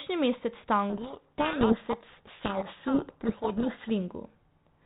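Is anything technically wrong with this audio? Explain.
Yes. From 0.90 to 3.91 s there is a codec payload misread. The G.726 code words arrive in the wrong bit order, so the decoder rebuilds wrong sample differences. The speech is buried in harsh distortion.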